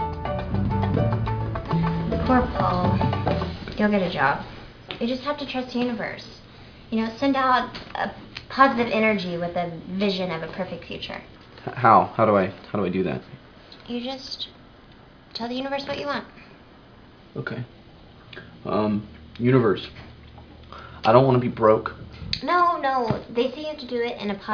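Nothing goes wrong anywhere in this one; there are no dropouts, glitches or other faults to point to at any moment.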